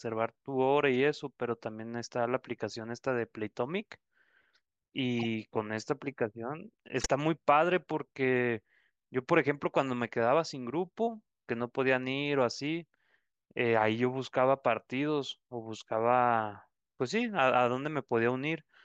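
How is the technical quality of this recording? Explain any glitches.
Two short glitches mar this speech recording, both from a corrupt frame decoded. From 5.19 to 5.26 s and again from 7.00 to 7.06 s, damaged compressed frames were played anyway, so misread gains and codes put energy in the wrong frequencies across a few frames each. Each is heard as a brief chirpy burst, the second louder (about -15 dBFS against about -25 dBFS). On a spectrogram, look for a smeared 60 ms patch; the waveform shows a sudden jagged blip.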